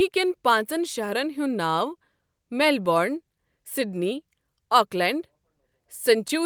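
No technical faults can be heard at any point in the recording.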